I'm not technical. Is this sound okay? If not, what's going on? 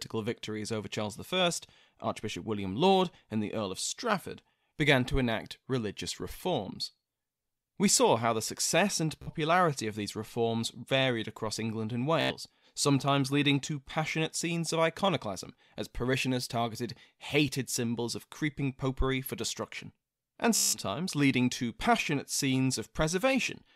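No. The speech has Bluetooth stutter in three places: 9.22 to 9.31 s, 12.21 to 12.34 s, and 20.56 to 20.80 s. Each time, the wireless link dropped some audio. The receiver filled the gap by replaying its last tiny slice over and over. That makes a short buzzing, machine-gun sound. Then the speech jumps ahead, skipping what was lost. The gaps grow longer through the clip: about 46, 91 and 168 milliseconds.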